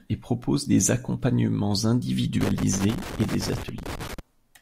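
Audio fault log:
2.41–4.19 s: loose connector crackle. A worn or dirty contact keeps making and breaking, chopping the speech into an irregular burst of scratchy crackle.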